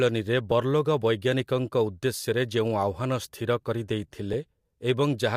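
A compressed frame went missing or was rejected by the decoder in this speech clip, so at 0.51 s, just before "ବର୍ଲୋଗ ବୈଜ୍ଞାନିକଙ୍କ", playback skips a few milliseconds.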